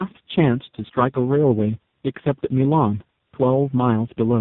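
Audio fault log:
throughout, tandem speech coding: the call passed through three separate low-rate speech coders in a row, with plain telephone-grade links between them, so it was decoded and coded again at each border and every coder worked on the previous one's damaged output. The errors stack: the speech sounds rougher, more muffled and more warbly than a single coder would make it, and the narrowband path leaves nothing above 3.8 kHz.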